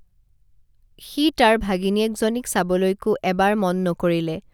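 No technical faults are audible.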